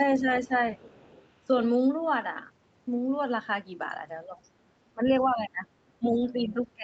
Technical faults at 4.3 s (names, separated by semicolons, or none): speech suppressed in double talk